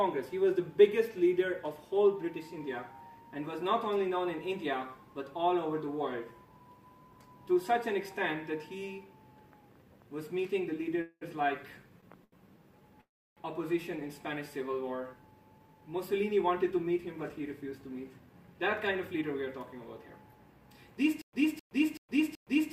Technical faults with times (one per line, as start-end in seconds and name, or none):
11.01-11.23 call audio freeze
12.24-12.34 short stall from a late packet
13.01-13.39 call audio freeze
15.58-19.23 jitter buffer speed-up
21.21-22.73 stutter with silent gaps